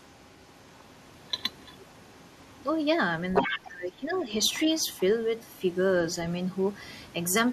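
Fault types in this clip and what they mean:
other side's voice leaking through: a faint second voice runs beneath the speech, briefly matching its level near 3.2 s, likely loudspeaker echo the canceller left behind.
speech suppressed in double talk: the speech dips by up to about 15 dB across most of 3.41 to 4.26 s, likely the canceller ducking both overlapping voices.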